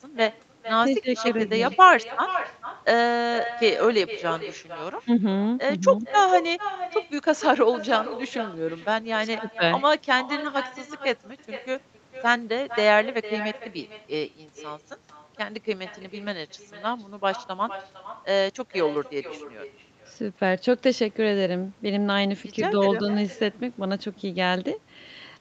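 Echo with no canceller runs through the whole clip. The far end is playing the call over a loudspeaker, its microphone picks that playback up, and nothing subtracts it before it travels back. Every phrase of speech returns about half a second later as a fainter copy, around 13 dB below the direct sound, thinner, riding over the next syllables. It is also band-limited like the direct path, with nothing above 8 kHz.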